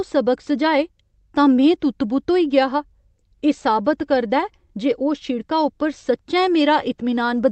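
Nothing goes wrong anywhere in this speech recording, which has simply come through an ordinary call path with its usual codec and jitter buffer and nothing more.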